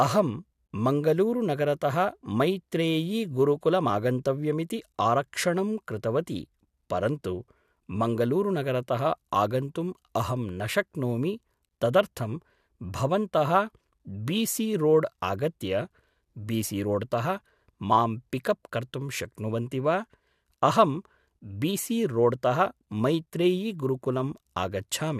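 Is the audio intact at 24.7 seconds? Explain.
Yes, the speech at 24.7 seconds plays through cleanly, with no dropout, click, distortion or other fault to be heard at that moment.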